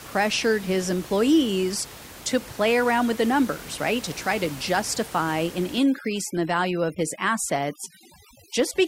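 From 5.79 s to the end at 8.87 s, overdone noise removal takes hold of the speech. A noise reduction stage is working far too hard. Any frequency band close to its noise estimate gets pulled right down or shut off. Quiet parts of the speech are caught with it. The room noise, heard earlier about 18 dB under the speech, drops and breaks up into twinkling specks.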